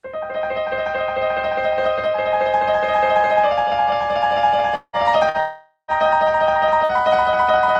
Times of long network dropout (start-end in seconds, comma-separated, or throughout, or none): 4.75-4.96, 5.40-5.91